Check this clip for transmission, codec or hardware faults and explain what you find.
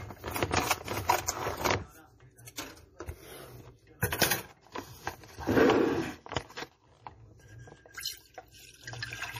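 Two faults are audible: lossy coding damage across the whole clip and one pre-echo event.

The damage is likely from MP3 compression at a low bitrate, roughly 40 kbps. Starved of bits, the encoder discards everything above 15.2 kHz and drops weak frequency lines that flicker between frames, leaving a dull top end with watery, swirling texture and smeared attacks.

From 2.56 to 2.58 s a sharp attack shows pre-echo. It fell late in a transform block, so quantisation noise sized for the loud onset spread back over the quiet moment before it. A hiss of about 23 ms precedes the hit, which sounds softened.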